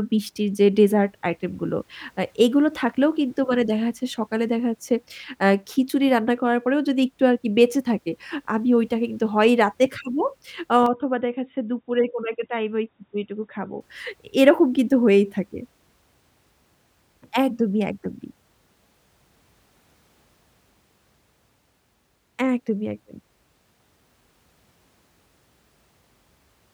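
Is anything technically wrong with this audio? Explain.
Yes. From 10.86 to 13.81 s the input likely switched to a poorer device, a narrower-band microphone path cutting everything above 3.8 kHz. The speech abruptly turns dull and boxy, drops roughly 5 dB, gains a faint new noise floor, then clears again, with no gap at either switch.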